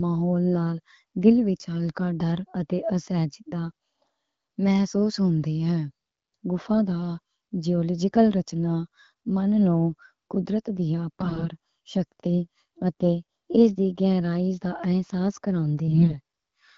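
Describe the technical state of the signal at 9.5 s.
At 9.5 s the audio is intact, with the speech carried cleanly through the AMR wideband (HD Voice) codec at a rate that fits 12.65 kbit/s.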